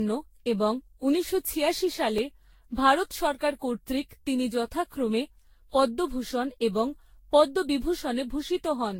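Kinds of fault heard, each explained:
Generation loss: The speech sounds swirly, smeared and hollow, with softened consonant attacks and nothing above about 16.7 kHz. The likely cause is around ten successive lossy encodes, consistent with Vorbis at roughly 59 kbit/s, each pass adding fresh quantisation noise and spectral holes.
Repeated buffer: At 2.18 s a 2.9 ms fragment plays twice in a row, with a hard join that is heard as a brief click or buzz rather than a stutter. The device replayed its last block when new audio arrived late, which fits a 128-sample buffer.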